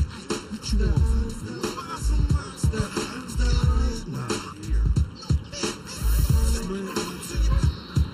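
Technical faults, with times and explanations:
Throughout, channel delay (comb filtering). One channel arrives late by a little under a millisecond, and the two are summed to mono. Components common to both channels cancel at evenly spaced frequencies. The first notch sits near 700 Hz, with further notches spaced about 1.4 kHz apart above it. The notches stay fixed for the whole clip. The sound is hollow and phasey, with a coloration that never shifts.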